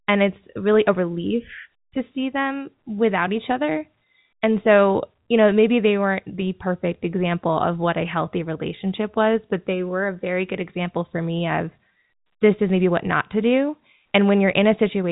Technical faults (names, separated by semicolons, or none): none